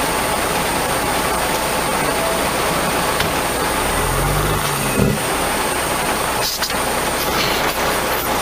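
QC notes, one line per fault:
Throughout, low bit depth without dither: grainy distortion rides on the sound and shifts with it, with quieter passages turning gritty. The error sits only about 10 dB below the signal, likely from rounding to a few levels, which fits 4 bits.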